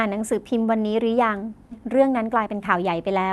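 At 1.71 to 1.73 s the speech makes a skip ahead: roughly 0.7 s of audio was discarded while later packets were already queued, so playback jumps forward with no gap filled, and the two sides of the cut are butted together almost directly.

From 1.81 to 3.31 s a jitter buffer speed-up follows. Having held excess audio, the receiver repeatedly trimmed short pitch-period-length pieces, about 100 ms in total, to cut latency. The speech runs at about 108% of its normal rate with unchanged pitch and sounds hurried.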